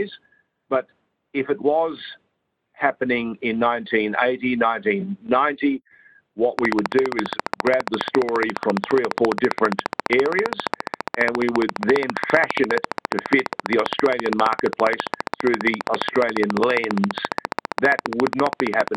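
Likely equipment interference injects a train of clicks from 6.59 to 18.96 s: regular ticks at 14.7 per second, around 15 dB over the sound.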